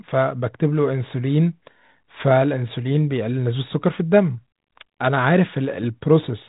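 Listening through the speech, nothing stood out as a technical problem.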